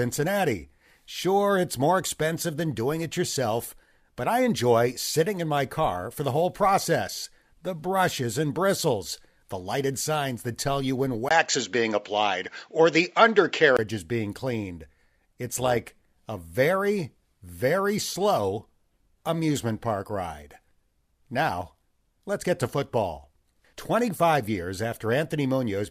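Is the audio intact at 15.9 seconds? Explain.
No. From 15.47 to 16.27 s the speech takes on a metallic buzz with extra tones around the voice, where the level pumps up and down by about 6 dB, around 200 times a second. This is overlap-add ripple: the audio was split into windowed frames and reassembled with an overlap whose windows don't add up to a constant gain, so the loudness dips and swells once per frame.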